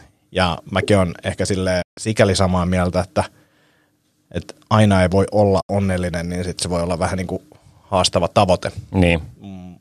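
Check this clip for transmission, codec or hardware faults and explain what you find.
Two digital broadcast dropouts interrupt the speech. At 1.82 to 1.98 s, between "ja mäkin on ehkä" and "sikäli samaa mieltä että", and again at 5.61 to 5.70 s, between "aina ei voi olla" and "niin sitten se voi", the receiver stopped getting usable frames and muted until valid ones resumed. Each gap fades out over about 8 ms into silence lasting roughly 144 ms and 72 ms respectively, consistent with several consecutive lost frames. The audio sent during those gaps is gone.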